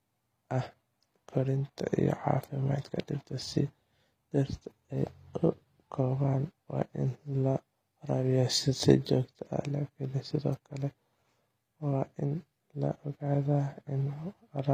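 Throughout, the speech treble sounds gritty and lispy on s sounds, likely from HE-AAC compression near 24 kbps; unlike plain low-pass dulling, the highs remain present but synthetic.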